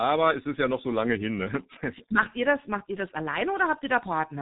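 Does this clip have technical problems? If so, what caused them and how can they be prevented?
Yes. The speech is muffled and hoarse throughout, with smeared consonants and nothing above 3.8 kHz. This is heavy G.723.1 codec damage. It uses coarse 30 ms voice-model updates in a stream near 6.3 kbit/s. Using a wideband codec at a higher bitrate prevents it.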